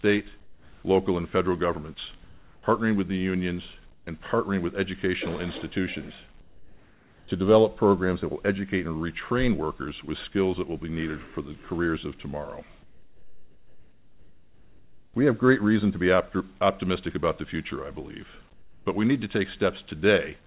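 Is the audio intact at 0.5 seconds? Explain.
No. From 0.41 to 0.83 s, about 420 ms, there is comfort noise in place of the background. The background sits about 31 dB below the loudest parts here. The sender likely stopped transmitting during this quiet stretch, and the receiver filled the gap with synthetic noise. The real background detail vanishes. A steady, featureless hiss takes over, about 1 dB quieter. Like the rest of the call audio, it has nothing above 4 kHz.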